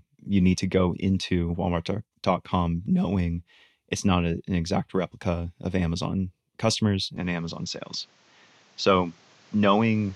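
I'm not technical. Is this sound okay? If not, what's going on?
No. From 7.16 seconds to the end, the speech suddenly sounds duller and flatter, with a faint new background hiss. The loudness stays about the same. This is likely an input switched to a poorer device, such as another microphone, mid-recording.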